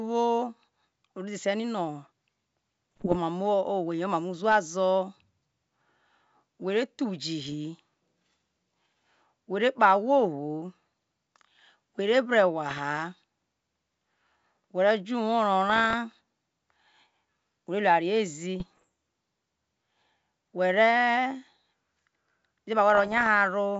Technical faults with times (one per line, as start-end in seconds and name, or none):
2.92-3.17 bit errors on an ADPCM link
7.45-7.55 bit errors on an ADPCM link
12.68-12.79 bit errors on an ADPCM link
15.68-15.94 bit errors on an ADPCM link
18.60-18.85 bit errors on an ADPCM link
22.95-23.27 bit errors on an ADPCM link